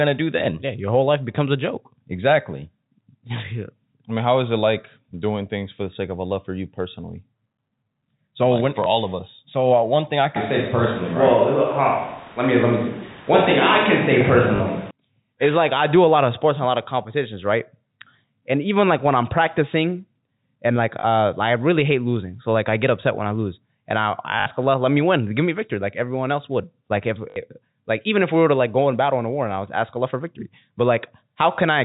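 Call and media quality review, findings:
Packet loss with last packet repeated: a small blip at 8.84–8.86 s (after "like when for"), robotic stutters at 14.56–14.60 s, 21.00–21.04 s (before "uh I really hate"), 24.40–24.46 s (after "I I"), and 27.30–27.36 s. The repeat rate buzzes at 50 Hz, which fits 20 ms packets.

Roomy, hollow sound with thinner bass from 10.36 to 14.91 s, with abrupt onset and return. Level is about unchanged, and room noise sits about 25 dB below the sound. This is likely a switch to a distant microphone. The band stays capped near 4 kHz from the G.711 telephone coding throughout.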